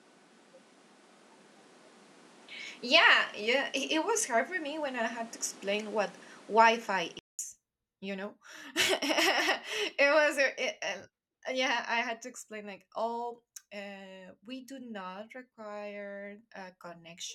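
From the start to 7.39 s the speech sounds duller and boxed in, with nothing above 12.1 kHz, a background noise sitting roughly 30 dB below the voice, and a level about 5 dB different from what follows. At 7.39 s a 200 ms silence breaks the audio and the sound opens up. This is likely an input switched to a poorer device, with the recording moving from a band-limited microphone to the fuller one.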